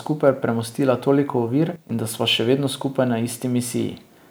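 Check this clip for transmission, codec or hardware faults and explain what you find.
One fault is present: a sudden gain jump from 1.76 s to 1.90 s, where the speech and its background noise drop together by about 12 dB and then return. The step is abrupt rather than ramped, likely a digital gain setting or bit shift applied without smoothing.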